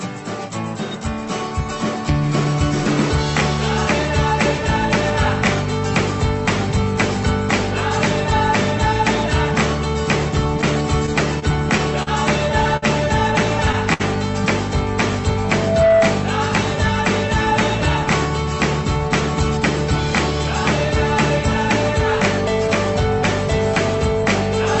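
From 10.61 to 12.09 s the audio drags and stutters through six brief holds, the longest 40 ms. These are repeated stalls (stutter): packets kept arriving late, and the jitter buffer repeatedly ran dry.

At 12.77 s and again at 13.93 s a sound is held too long, by about 55 ms and 63 ms respectively. Each is a short stall from a late packet: the receiver stretched the last sound until the delayed packet arrived.

From 15.44 to 16.31 s a single 657 Hz tone swells within about 0.4 s into a squeal roughly 5 dB above the programme. This is loudspeaker feedback squeal, where the microphone re-captured its own loudspeaker and the loop gain exceeded one at that frequency.

All of this passes through a call codec whose treble limit points to 8 kHz audio bandwidth.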